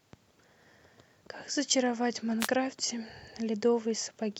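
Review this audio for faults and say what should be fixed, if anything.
Wireless microphone noise hit at 2.39 to 2.49 s: a roughly 90 ms swish of static cuts across the speech as the FM radio link fades, reflections cancelling the direct signal so receiver noise briefly rises over the audio. Prevent it with a diversity receiver and clearer antenna line of sight.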